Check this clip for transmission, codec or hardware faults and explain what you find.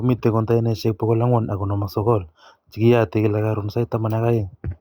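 There is one hardware fault, present throughout the speech: sample clock jitter. The converter's clock wavers by roughly a microsecond and a half, so samples land slightly early or late, leaving an error around 45 dB below the signal. It sounds like a faint hiss or roughness that grows on loud, bright sounds. Unlike steady background noise, it disappears in the pauses.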